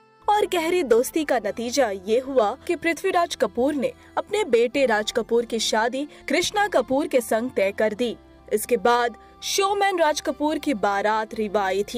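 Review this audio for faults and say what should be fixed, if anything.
Channel delay (comb filtering) runs from 5.55 s to 8.58 s. One channel arrives about a single sample late, a few hundredths of a millisecond, and the two are summed to mono, so cancellation lands with its first notch up near 20 kHz. That takes a soft edge off the very top of the audio. Unlike flanging, the notch stays fixed rather than sweeping. Unlike a plain low-pass, it starts and stops abruptly with the misalignment. To prevent it, keep both channels sample-aligned before any mono fold-down.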